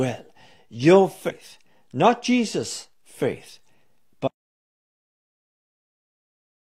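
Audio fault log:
1.26–1.32 s, compressed frames skipped: around 40 ms of speech jumps ahead, since whole frames are left out of playback.
4.28 s to end, audio dropout to silence: the speech cuts off into silence with no room tone, likely from lost input while recording continued, unlike a momentary skip.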